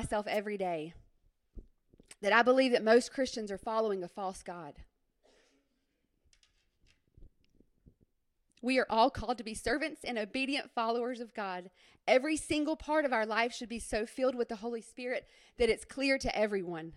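At 0.33 to 0.37 s, a wireless microphone noise hit occurs. The radio link fades briefly, and receiver noise rises into a short swish of static over the speech.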